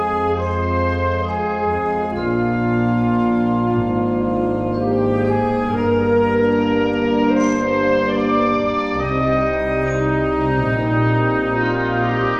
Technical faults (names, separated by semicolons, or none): Bluetooth SBC bit pool drop